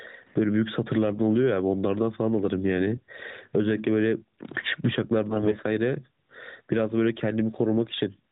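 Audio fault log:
throughout: gain pumping. The level swings by about 20 dB, so soft and loud passages sit unnaturally close in level and the speech sounds squashed. The likely cause is microphone gain set far too high, with a fast limiter or compressor pulling it down on each peak. A noise gate would cut the gaps toward silence.
5.30 to 5.57 s: AMR bit errors. For about a quarter of a second the speech turns hoarse, scratchy and gargly, but its pitch and loudness roughly hold. The damage spans about a dozen 20 ms codec frames. Flipped bits in the weakly protected parts of those frames misplace the excitation pulses and skew the finer gain and spectral values. The frames still decode, so there is no gap, mute or repeated fragment as packet loss would give. The rough texture is also distinct from the steady 4 kHz band limit of the AMR-NB coding heard throughout.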